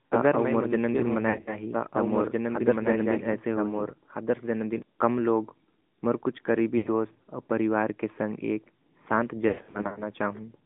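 AMR narrowband mobile codec, throughout: the speech is squeezed into a 150 Hz to 3.5 kHz line band and sounds plainly buzzy and synthetic, which fits a mid-rate mode around 10 kbps.

Doubled audio track, from the start to 4.82 s: a second full-band copy runs roughly a second and a half behind, about 5 dB quieter, with no room colour. It stops abruptly after "अगर मैं मनुष्य हाेहू", before "कम लोग", likely from the same audio being captured twice along a slower path.

Lost AMR speech frames, at 1.30 to 1.58 s, 6.78 to 6.90 s and 9.48 to 10.04 s: the decoder reuses the last good settings with falling gain, so the sound smears, dips and warbles. About 120 ms is lost in the first stretch, 80 ms in the second and 300 ms in the last, which fades out for runs of up to 100 ms before coming back rough.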